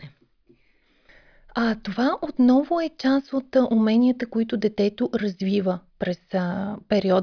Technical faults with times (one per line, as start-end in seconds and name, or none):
none